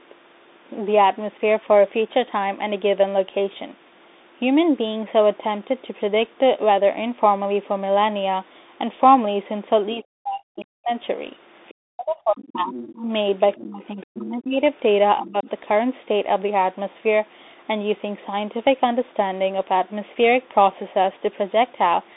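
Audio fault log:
throughout: Bluetooth CVSD headset codec. The sound is confined to roughly 250 Hz to 3.7 kHz, with nothing above 3.8 kHz. A one-bit up/down coder with an adapting step, which fits 64 kbps CVSD, lags on fast loud transients, leaving plainly audible scratchy distortion and granular hiss.
9.95–10.92 s, 11.89–14.62 s, 15.19–15.49 s: speech suppressed in double talk. The talker's level sinks, by as much as about 40 dB in the first span, about 35 dB in the second and about 15 dB in the third, roughly two seconds affected in the middle stretch. The likely cause is an echo canceller that cannot tell near speech from far-end echo and ducks everything.
10.59–10.63 s, 11.69–11.74 s, 12.45–12.94 s, 13.52–14.26 s, 15.25–15.31 s: other side's voice leaking through. A second, fainter voice surfaces at about 10 to 30 dB below the talker, briefly in the short bursts and for longer at 12.45 and 13.52 s. 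This is likely far-end audio from a loudspeaker reaching the microphone and escaping the echo canceller.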